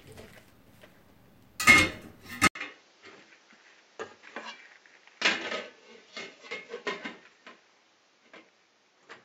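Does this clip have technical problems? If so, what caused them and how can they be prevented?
Yes. At 2.47 s the sound drops out for about 80 ms, then continues to the end duller and a little quieter, with nothing above 7.6 kHz and a new background noise sitting roughly 30 dB under the sound. This is likely an input switched to a poorer device. A mere bandwidth cut would not bring a fresh noise floor, a level step and a gap together. Locking the recording input to one chosen microphone prevents this.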